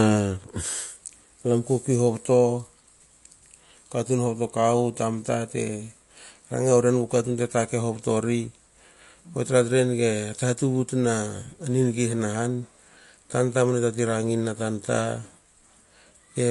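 From start to end, the speech has no content above 11.3 kHz, and the sound is audibly watery and swirly, with metallic chirps on s sounds and smeared attacks. This is most likely MP3 compression at a low bitrate, consistent with roughly 48 kbps. Short of bits, the encoder cuts the treble at a fixed point and drops weak frequency lines, which flicker on and off between frames and produce the plainly audible swirl.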